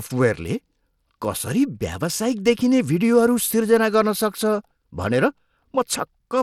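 From start to end, the speech is plainly degraded by coding damage. Nothing sounds above 16.8 kHz, and the upper treble flickers in and out. A gritty noise and some aliasing ride on the voice. The likely cause is Bluetooth SBC compression at a low bit pool, which fits roughly 96 kbps.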